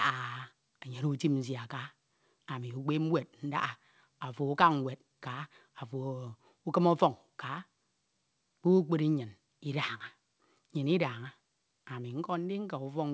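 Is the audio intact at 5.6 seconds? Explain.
Yes, the audio is intact at 5.6 seconds; the speech there passes cleanly through the G.722 call path, whose band ends at 8 kHz, with no dropout, glitch or other fault at that moment.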